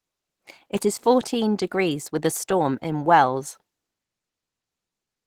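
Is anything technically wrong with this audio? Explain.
Yes. Throughout, the speech is likely squeezed through low-bitrate Opus compression, fitting roughly 16 kbps in hybrid mode, which leaves it audibly muffled, hoarse and grainy.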